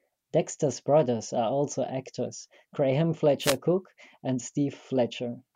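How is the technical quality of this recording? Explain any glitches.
The recording has one glitch: a wireless microphone noise hit from 3.40 to 3.57 s, lasting just under 0.2 s. It sounds like a brief swish of static that sits over the speech and partly masks it. The radio link from an analogue FM microphone briefly fades when reflected signal paths cancel at the receiver. As the signal drops, receiver noise rises through the audio, producing this short burst before the link recovers.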